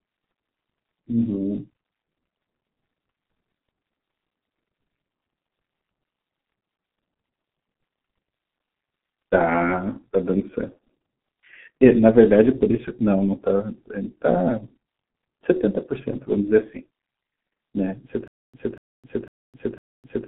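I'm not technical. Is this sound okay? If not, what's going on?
No. Across the whole clip the speech has gone through the G.723.1 codec, an old, very squeezed internet-phone format. It throws away everything above about 3.8 kHz and heavily simplifies what's left, so the voice sounds muffled and a bit hoarse, with smeared consonants.

Then from 18.28 s to the very end there's a stutter with silent gaps. A quarter-second snippet plays four times at a steady half-second pace, with dead silence between repeats. That's likely the player or stream stalling and replaying its last bit, so the real audio there is lost.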